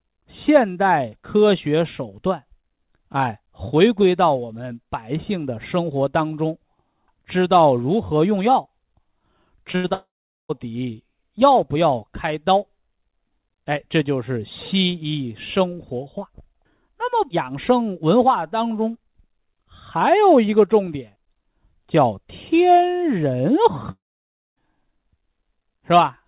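At 9.72 s the speech hits a short concealed packet loss. About 20 ms of audio never arrived in time. The receiver stretched the last sound to cover it, then blended back. It is heard as a quick smear lasting about 37 ms, until 9.76 s. The same thing happens again at 9.88 s, ending at 9.92 s. Between them, any short consonant may simply vanish.

From 9.76 to 9.86 s comes a burst of packet loss. About 80 ms was lost in one run. The receiver kept the last sound going and turned it down as the gap went on. A voiced sound becomes a brief held buzz. An unvoiced one becomes a fading hiss. Then the speech picks up further along, with that stretch gone.

From 9.94 to 10.51 s there is a gap that was likely a long network dropout. About 560 ms of audio is missing. A short fading buzz or hiss carries on from the last sound. Then roughly 420 ms of silence follows. The speech returns further on, without the lost part. 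The same thing happens again from 23.91 to 24.58 s. This time about 660 ms is missing, and roughly 580 ms of it is silent. All of this passes through a G.711 call path, so nothing above 4 kHz is present.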